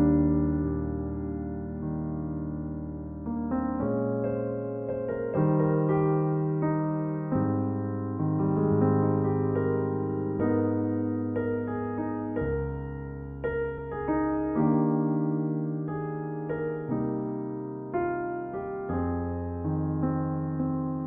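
At 13.77 s, compressed frames skipped: about one 23.2 ms frame goes missing, so the audio jumps ahead by about 20 ms.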